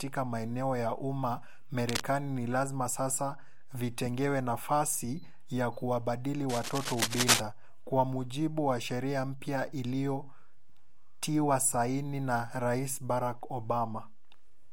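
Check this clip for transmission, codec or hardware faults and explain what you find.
Two hardware faults are present: a DC offset across the whole recording, and two bursts of cable scratch noise.

DC offset runs throughout. The entire waveform sits shifted off zero by a constant amount, so it is inaudible in itself but wastes headroom and shows as a steady component at 0 Hz. Unlike low-frequency hum, it has no pitch and never fluctuates.

Cable scratch noise appears at 1.79–2.03 s, right after "maeneo ya umma", a little below the speech level, and again at 6.49–7.40 s, between "vitengewe nafasi ya kuwabadili" and "kwa mujibu wa sheria", roughly as loud as the speech. Both sound like ragged scratching and rustling laid over the sound, most likely from a worn cable or connector being moved and its contact resistance jumping around. Dropout crackle would gap the signal instead, whereas this is added on top.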